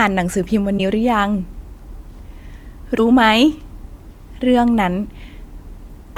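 Speech clip with two brief glitches, at 0.77–0.80 s and 2.97–3.00 s. Each lasts roughly 30 ms. The likely cause is a broken MP3 bit reservoir after dropped frames.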